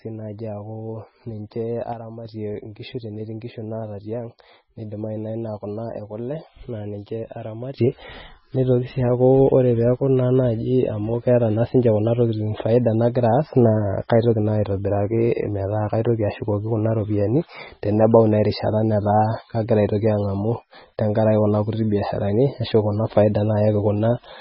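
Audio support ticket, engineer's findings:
Watery, swirly speech throughout, nothing above 5.6 kHz, heavy smearing; likely MP3 compression, starved encoder dropping weak frequency lines, fits roughly 16 kbps.

Sudden gain jump: level and noise floor drop about 6 dB at 1.93 s, restore at 2.25 s; rise about 12 dB at 7.78 s, held to end. Likely unramped digital gain change.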